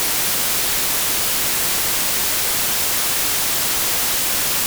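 Nothing in this audio stands out as a technical fault, so there's nothing to flag here.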